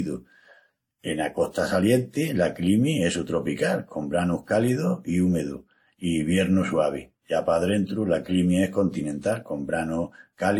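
Throughout the speech, the top of the spectrum stops cleanly at 18.9 kHz, and on a spectrogram a flat ceiling sits there while the bands beneath look patchy and smeared. The sound carries two layers of codec damage heard together, the likely result of transcoding between lossy codecs: a first encode near 96 kbit/s, then AAC-LC at a lower rate, around 54 kbit/s. The second encoder re-spends its bits on the first one's artefacts and adds its own.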